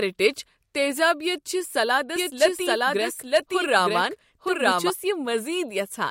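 From 2.16 to 4.90 s a doubled audio track sounds, a full-band copy about a second late and roughly equally loud, likely from a second capture path; the waveform shows the same shapes repeated.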